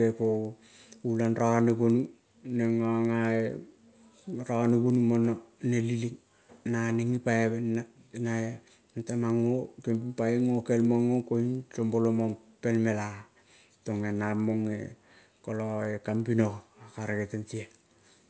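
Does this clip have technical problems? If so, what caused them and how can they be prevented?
Yes: a resampler restarted on every block throughout, with 50 ms blocks each converted independently, consistent with 44.1 kHz to 16 kHz, leaving small edge errors heard as a 20 Hz buzz under the speech. Prevent it by running one continuous resampler whose filter state carries across block boundaries.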